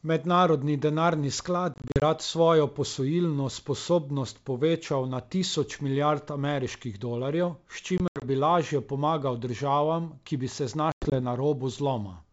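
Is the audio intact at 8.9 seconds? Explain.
Yes, the speech at 8.9 seconds is intact, carried through G.722 wideband telephone coding at 64 kbit/s with no fault at that moment.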